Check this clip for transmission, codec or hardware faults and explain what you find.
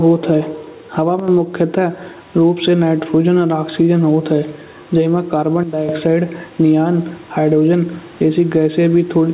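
Two faults are present: gain pumping across the whole speech clip, and two sudden gain jumps. The missing content above 4 kHz comes from the narrowband call path and is normal.

Gain pumping runs from start to finish. The level rises and falls by around 10 dB. Loud and soft parts sit too close together, so the speech sounds squashed. The likely cause is input gain set far too high, with a fast limiter or compressor pulling it back down on every peak.

The first sudden gain jump comes at 1.20 s, after "होत है हवा". The level drops by about 7 dB within a sample, and it lasts about 0.09 s. The second comes at 5.63 s, after "होत है जइ मा", and lasts until 5.89 s, just before "ऑक्साइड नियॉन हाइड्रोजन". That drop is about 12 dB. In both jumps, speech and background fall together, with no fade in or out. This points to a digital gain change applied without a ramp, likely a setting change or a bit shift.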